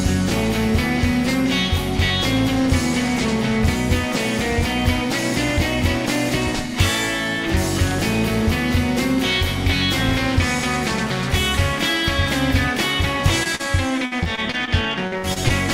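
Short concealed packet loss occurs at 13.43 s (20 ms) and 13.55 s (40 ms). Audio arrived too late, so the receiver continued the preceding sound over each hole, leaving a brief smear or wobble.

Repeated packet loss (robotic sound) follows from 14.05 to 14.69 s and from 15.07 to 15.52 s. Holes of up to 59 ms recur, each patched by extending the last sound, filling about 22% and then 33% of those stretches. The result is choppy audio with fragments missing.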